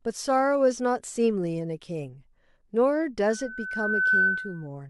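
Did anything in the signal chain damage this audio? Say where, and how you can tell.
Yes. From 3.27 s to 4.67 s a steady 1.5 kHz tone rises out of the speech, swelling over about a second into a piercing squeal that peaks at roughly 5 dB above the voice. This is loudspeaker feedback squeal, arising in the analogue stage where a microphone hears the loudspeaker it drives. Around 1.5 kHz the loop gain passed unity, so that frequency fed on itself and grew by itself.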